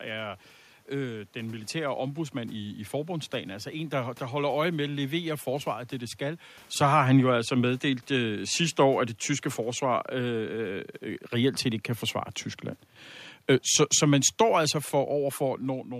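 Automatic gain falling runs from 6.79 to 9.22 s, starting after "forsvaret det det skal" and settling by "forsvar øh". The gain control judged the input too loud or its background noise too strong and eased its gain down by about 4 dB, so the speech and room noise sink together.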